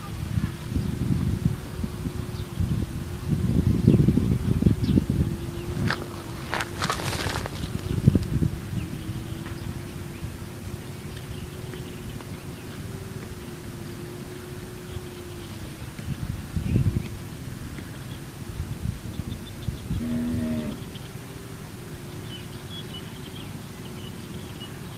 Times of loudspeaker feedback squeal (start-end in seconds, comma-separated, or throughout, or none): none